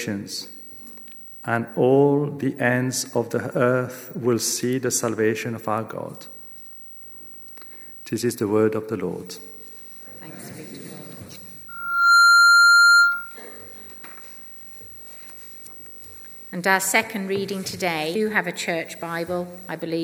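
At 11.68 s a loudspeaker feedback squeal begins and runs until 13.39 s. A single tone at 1.4 kHz swells over roughly half a second until it stands about 15 dB above the rest of the sound. The microphone is picking up the loudspeaker it drives, and at 1.4 kHz the loop gain exceeds one, so that frequency keeps reinforcing itself.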